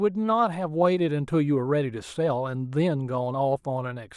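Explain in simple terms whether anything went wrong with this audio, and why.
Nothing went wrong with this speech recording; the signal stays steady throughout, with no technical problems for a listener to notice.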